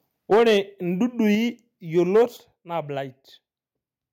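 From 0.31 to 0.57 s the loudest speech turns harsh and crackly. The peak tops sound flattened. This is likely microphone overload, with the input driven about 8 dB past the converter's limit. About 10% of the samples there are cut off.

At 0.34 s the level drops suddenly by about 2 dB. The speech and background fall together. This is likely the microphone volume stepped down by the call software in reaction to the clipping.

A short crackle follows from 1.33 to 1.35 s. The peaks likely just touch the limit, so only a few samples are cut. At 1.35 s the level steps down again, by about 4 dB.

From 1.97 to 2.23 s the distortion returns, likely about 4 dB over the limit. At 2.37 s a final step lowers voice and background by about 6 dB.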